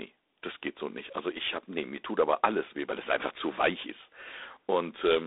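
From start to finish the speech carries G.726 ADPCM damage: a harsh, rasping hiss that rises and falls with the speech level, which fits 24 kbit/s coding with too few bits per sample. The band runs from 300 Hz to 3.7 kHz, with nothing above 3.9 kHz.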